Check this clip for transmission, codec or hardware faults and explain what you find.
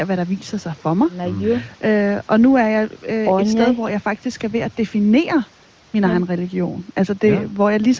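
No transmission, codec or hardware faults can be heard in this speech. The sound is band-limited to nothing above about 8 kHz, as expected from call microphone processing and the AMR wideband (HD Voice) codec, which here runs at 23.05 kbit/s and leaves at most faint traces on the speech.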